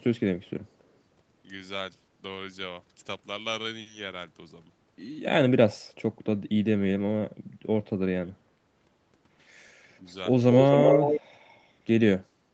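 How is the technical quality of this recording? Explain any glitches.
It's a call recording with two real problems: speech suppressed in double talk, and an echo leak near the end. The audio also tops out at 8 kHz, which fits a call codec running at a modest bitrate.

Speech suppressed in double talk shows up at 8.23 to 8.52 s, where the voice sinks hard, roughly 25 dB, for about 300 ms. It happens again at 9.99 to 10.07 s, a much shallower dip of around 5 dB lasting about 70 ms. The likely cause is both ends talking at once. The echo canceller couldn't tell this talker apart from the loudspeaker echo, so it ducked everything and took the local voice down with it.

The echo leak runs from 10.52 to 11.21 s. You hear a delayed copy of the voice trailing about 240 ms behind, at roughly the same level as the original, so it's hard to miss. This is likely a far end on speakerphone whose echo canceller didn't fully scrub what its microphone picked up. 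The leftover got sent back down the line.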